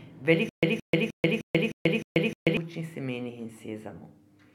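From 0.49 s to 2.57 s the speech breaks into a stutter with silent gaps. A 170 ms fragment plays, then about 136 ms of dead silence, and the same fragment returns seven times on an even 307 ms cycle. This is likely a stalled player or stream replaying its last buffered piece at each retry, and the speech due in that span is lost. The waveform shows identical blocks separated by flat silent gaps. The spectrogram shows matching stripes split by empty columns.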